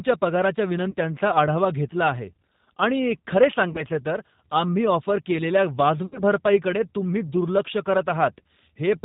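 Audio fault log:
Throughout, G.729 codec: the speech sounds slightly rough and synthetic, consistent with an 8 kbit/s coder rebuilding each 10 ms frame from a vocal tract filter, a pitch predictor and a few pulses. On a spectrogram, nothing appears above 4 kHz, and the harmonics look smeared and blocky.
0.91–0.95 s, 3.73–3.83 s and 6.06–6.20 s, VoIP packet loss concealed by the speech codec: the decoder filled the gaps by extending the last pitch and filter. The first two gaps fit about 20 ms of missing audio, and the third fits about 60 ms. The first comes just before "आढावा घेतला आहे आणि", the second just after "घेतला आहे आणि खरे", and the third after "ऑफर केलेल्या". Each gap is heard as a short buzzy tone or coloured noise that fades, followed by weakened sound while the decoder recovers. On a spectrogram, the last frame's spectrum stretches across each gap, and the waveform envelope decays there.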